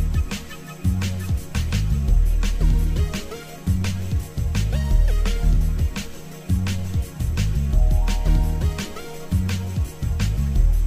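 No technical faults can be heard anywhere in the audio. There is no moment in it that calls for a timestamp or an explanation.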